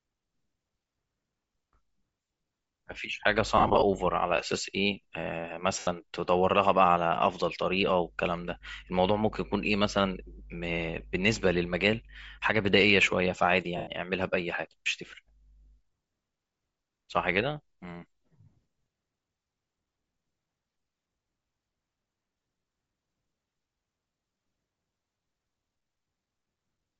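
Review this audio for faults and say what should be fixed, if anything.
Bluetooth LC3 compression runs through the whole speech clip. The upper spectrum sounds thinned and replaced by hiss, giving the speech a breathy, grainy edge that is plainly audible. This is likely LC3 encoding at a low rate, consistent with roughly 32 kbps and 10 ms frames: with too few bits to spend, the codec drops much of the upper spectrum and fills the gaps with shaped noise. Raising the LC3 bitrate on the link would prevent this.

Lost LE Audio frames occur from 3.58 to 3.82 s, 5.79 to 5.87 s and 13.77 to 13.87 s. The first is a cluster of short dropouts totalling about 140 ms across 240 ms, with the longest gap around 50 ms. The others are single gaps of about 80 ms and 100 ms. In each gap the decoder repeats the previous spectrum with scrambled phase, so the speech turns into a brief noisy smear instead of cutting out. 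Better radio conditions or retransmission headroom would prevent these losses.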